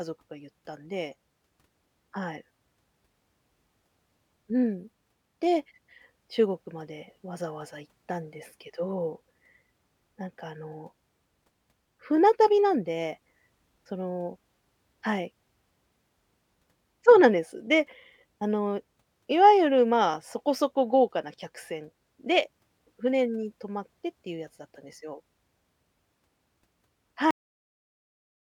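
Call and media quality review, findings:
Cut-off end at 27.31 s: speech stops mid-sound, straight to digital silence, no decay. Final buffers never written or played out. Waveform ends abruptly; spectrogram shows a hard vertical edge into blank.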